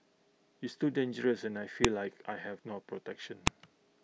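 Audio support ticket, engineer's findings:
Two sharp, loud snaps in the speech at 1.85 s and 3.47 s, each only a millisecond or so, no matter what the talker's doing. Classic file header played as audio: looks like separate WAV pieces got joined or streamed with headers left in, so those few dozen header bytes get played as samples. Suspect the concatenation or streaming step. Strip headers before joining and both clicks should go.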